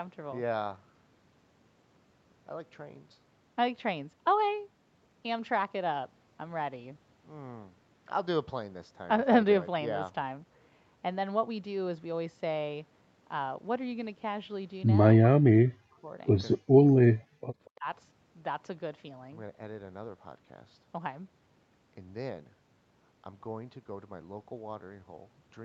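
Speech suppressed in double talk hits this speech recording from 15.2 to 16.18 s, 16.57 to 16.83 s, 17.0 to 17.41 s and 17.69 to 17.87 s, with the voice repeatedly dropping by around 40 dB, nearly to silence, likely because an echo canceller heard both sides talking together and turned everything down. Echo leak appears in two short scraps, from 16.52 to 16.58 s and from 17.65 to 17.7 s, where a copy of the speech returns 237 ms late, first roughly 10 dB below the voice and then barely audible. This is consistent with a loudspeaker echo the canceller failed to remove completely.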